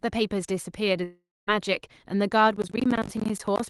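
A short speech recording carried over a call path whose Opus coding limits the band to about 12 kHz. From 1.03 to 1.50 s the sound breaks off: the last moment is stretched into a fading buzz, then about 240 ms of near-silence follows before the speech resumes with a gap of about 440 ms. The likely cause is a long network dropout. On a spectrogram this appears as a smeared, decaying band followed by an empty stretch, and the waveform collapses to a flat line. From 2.56 to 3.60 s a gritty crackle tears through the speech. This is processor overload crackle: about twenty audio buffers of roughly 20 ms each missed their deadlines and were replaced by silence. The waveform shows repeated hard-edged notches, and the spectrogram shows thin vertical broadband streaks across that span.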